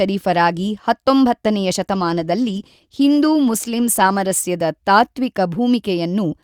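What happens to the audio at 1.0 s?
Nothing goes wrong at 1.0 s; the speech runs on intact through that moment, with no dropout, click or other fault to be heard.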